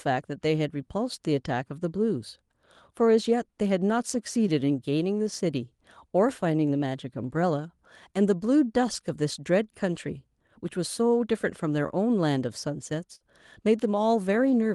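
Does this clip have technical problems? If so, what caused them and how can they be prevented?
Yes. Near the end, from 13.15 to 13.23 s, there is a burst of packet loss lasting about 80 ms. For the first 50 ms the receiver keeps repeating the last sound and turns it down, producing a brief held, fading sound. About 40 ms of the original speech is skipped, so the speech resumes slightly further along. The call path's top end stops near 12 kHz, as expected for the Opus codec it uses. To prevent this, use a larger jitter buffer or enable forward error correction, and improve the network's stability.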